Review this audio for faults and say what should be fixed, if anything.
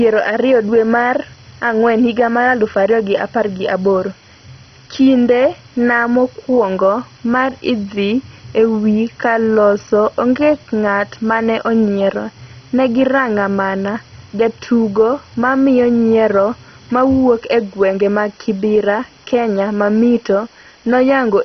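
Low bit depth with dither runs throughout the speech: a constant, even hiss sits roughly 30 dB below the speech, with no harshness or distortion on top. The dither has turned rounding error into steady white noise, which fits a resolution near 7 bits. Keep the audio at 16 bits or more until final delivery.

MP2 compression is the likely cause of the dull, gurgling, granular texture heard throughout. Nothing remains above 6.1 kHz, and the surviving bands sound coarsely quantised and unstable, which fits a rate around 32 kbps. Encode at a higher bitrate or use a more efficient codec.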